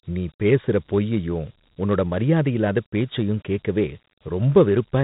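Throughout, the speech carries Dialogic VOX ADPCM damage. Coarse 4-bit coding adds audible grit, fitting a 32 kbps stream. Nothing sounds above 3.8 kHz.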